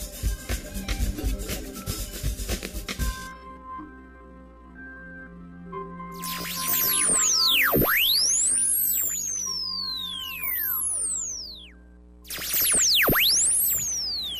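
From 3.14 s to 11.66 s a time-stretched section runs at about 0.52 times normal speed, likely from software stretching the audio by repeating short pieces. The pace abruptly drags, yet its pitch stays put, unlike simple slowed playback, which would drop it.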